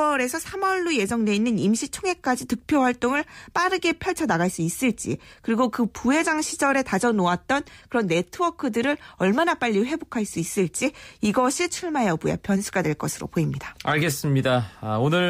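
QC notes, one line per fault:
No faults found anywhere in this speech recording.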